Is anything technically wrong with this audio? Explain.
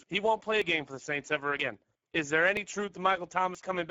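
Yes. The speech carries codec damage throughout, and it skips briefly four times.

Speex codec: Across the whole clip the speech has the plainly audible roughness of a low-rate CELP coder, consistent with Speex running near 9.8 kbps. With so few bits for the excitation, the voiced sound turns noisy and hoarse rather than clean. On a spectrogram, nothing appears above 7.7 kHz, and the upper band is a smeared, noise-like fill instead of defined harmonic structure.

Audio missing between chunks: Short skips occur at 0.62, 1.59, 2.57 and 3.55 s, about once per second. The first falls between "he won't play a" and "game for the". Each time, a couple of hundredths of a second vanish and the two sides are butted together with no gap, likely because the audio was handled in one-second chunks and a piece was lost at each changeover. On a waveform, each shows as an abrupt discontinuity in the cycle shape.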